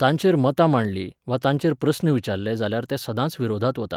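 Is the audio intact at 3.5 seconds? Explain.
Yes, at 3.5 seconds the speech plays through intact, with no dropout, click, distortion or other fault at that moment.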